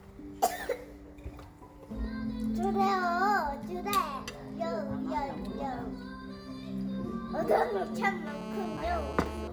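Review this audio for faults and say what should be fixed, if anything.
A nearby 2G phone on a call, pulsing its transmitter about 217 times a second, gets rectified by the audio circuitry, producing GSM phone buzz: a steady, raspy 217 Hz tone with dense harmonics from 8.27 to 9.48 s, about 10 dB below the sound. Keep mobile phones away from the recording chain or switch them to flight mode, and use shielded, well-grounded cabling.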